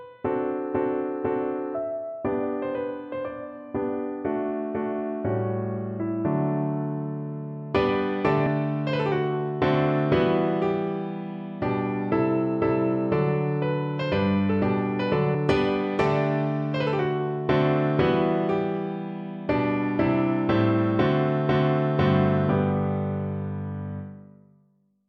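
At 15.34 s, compressed frames are skipped: the audio jumps ahead by roughly 150 ms, which fits about four 32 ms frames being lost.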